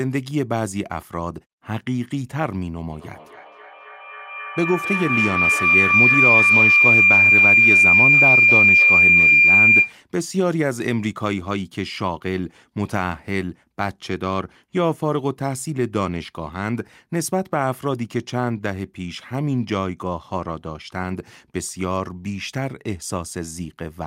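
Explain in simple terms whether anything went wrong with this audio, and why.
Yes, there's a feedback howl from about 2.9 s to 10.0 s. Sound from a loudspeaker gets back into a microphone on the same call and loops round, growing each time. It turns into a shrill tone near 2 kHz, pulsing about three times a second, and ends up louder than the speech.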